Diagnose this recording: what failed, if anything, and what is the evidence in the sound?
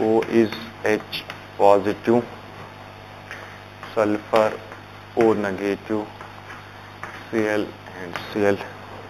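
A faint metallic shimmer rides on sibilant and bright sounds for the whole clip, while the true top of the band sounds dulled. Above about 4 kHz sits a mirrored copy of the lower spectrum, extending to 8 kHz and lying very roughly 25 dB below the signal. This is imaging from linear upsampling, a fault in the sample-rate conversion stage. The pattern fits audio raised from 8 kHz to 48 kHz by straight-line interpolation, which filters too weakly to remove those mirror images.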